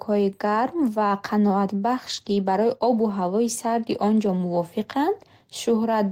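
At 0.77 s before "ва қаноатбахш", 2.09–2.35 s after "гарм ва қаноатбахш", and 3.63 s before "он ҷо", a lost packet rebuilt from error correction leaves no gap. The low-bitrate copies sound rougher and noisier, appearing on a spectrogram as grainy, smeared patches.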